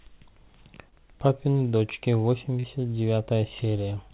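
At 0.89 to 0.95 s and again at 2.60 to 2.66 s, short concealed packet loss occurs. About 30 ms of audio arrived too late each time. The receiver stretched the preceding sound to cover it, leaving a brief smear. The call path's 4 kHz ceiling, consistent with a narrowband telephone codec such as G.711, dulls everything around these gaps.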